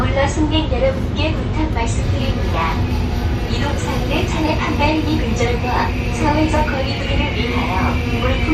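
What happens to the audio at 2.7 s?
Nothing goes wrong at 2.7 s; the audio carries on intact through that moment with no dropout, click, distortion or other audible fault.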